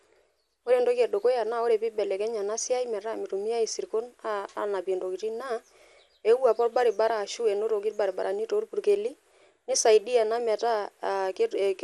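Dull, gurgling speech with a granular edge throughout, upper frequencies flickering away, points to MP2 compression, likely at a low rate around 80 kbps.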